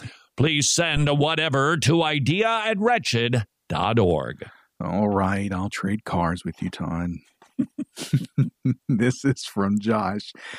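A phantom power thump arrives at 0.97 s and lasts until 1.09 s, just before "a whatever to idea". Switching the supply on or off on the live input sends a voltage step through the coupling capacitors, heard as a deep low thud peaking around -15 dBFS and dying away within about 27 ms.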